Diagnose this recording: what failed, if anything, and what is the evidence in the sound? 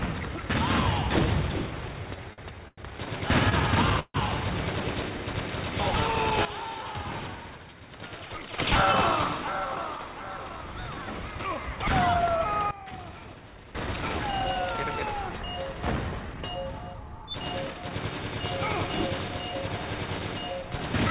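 The early disturbances sit in the network and jitter-buffer stage. Short stalls from late packets occur at 2.33–2.41 s, 2.68–2.81 s and 3.50–3.54 s, holding the sound for 48 ms, 97 ms and 19 ms. Each time a packet missed its playout slot, the buffer ran dry and the receiver stretched the last sound until the packet arrived. On a spectrogram each shows as a smeared, horizontally streaked patch. The waveform repeats itself with a slight buzz or dip.

A call audio freeze at 3.99–4.17 s is likely another buffer underrun, longer than the stalls. About 148 ms of concealment is inserted: a fading buzz that ends in roughly 30 ms of silence before the audio resumes from where it stopped, with nothing lost. On a spectrogram this is a decaying, smeared band that trails into a blank column. The waveform's envelope collapses to a flat line, then restarts abruptly.

Two sudden gain jumps follow, likely digital gain steps applied without a ramp in the call-processing stage. 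From 6.45 to 8.59 s the level drops by about 12 dB, and from 12.71 to 13.75 s by about 16 dB. Each step comes back up at the end. The sound and its background noise fall and recover together. The waveform shows a sharp, rectangular change in envelope height, and the spectrogram dims uniformly across the band, with edges aligned to a single sample. The audio passed through a G.711 mu-law call path, which leaves nothing above 4 kHz.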